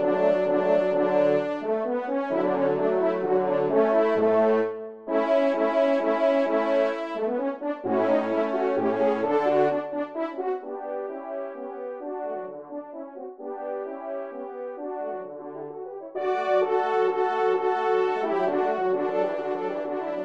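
No technical faults are audible.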